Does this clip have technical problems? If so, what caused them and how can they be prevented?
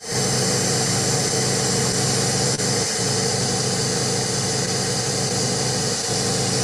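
Yes. There's clock drift between sender and receiver running through the whole clip. The sender's clock runs slow by around one and a half percent, so the receiver's jitter buffer keeps draining and it has to patch things up, giving small timing hiccups at uneven intervals all the way through. Resampling at the receiver to track the sender's actual rate would prevent it.

At 2.55 to 2.60 s there's a short stall from a late packet. The buffer ran dry, so the receiver held the last bit of sound for 28 ms until the packet showed up, then carried on. Nothing is lost, but the playback delay grows by 28 ms. A slightly deeper or adaptive jitter buffer would prevent it.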